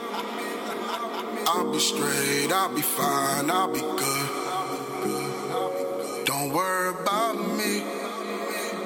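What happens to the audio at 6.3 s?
At 6.3 s the receiver is in a digital radio blending to analogue episode, running 4.73 to 8.29 s. After a 232 ms cross-fade to FM, the level drops about 2 dB, and hiss sits roughly 30 dB down. That smooth fade, rather than a hard gap, marks it apart from a dropout.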